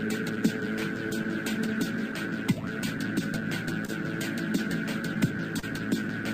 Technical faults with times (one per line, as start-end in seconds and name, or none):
0.00-6.34 clock drift between sender and receiver
0.35-3.90 scattered short gaps
5.59-5.64 short stall from a late packet